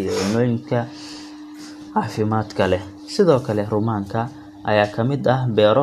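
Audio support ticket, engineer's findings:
No audible faults found in the speech recording. Nothing to escalate from the audio side.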